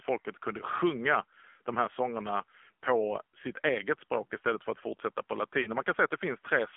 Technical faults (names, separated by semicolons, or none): AMR narrowband mobile codec; lost AMR speech frames